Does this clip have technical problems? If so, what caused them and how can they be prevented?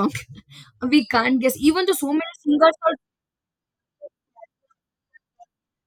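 No, nothing in this speech recording points to a technical fault, so there is no cause to trace and no remedy needed.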